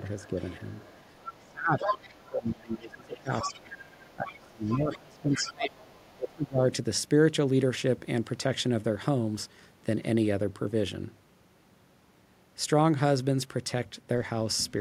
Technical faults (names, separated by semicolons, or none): speech suppressed in double talk; other side's voice leaking through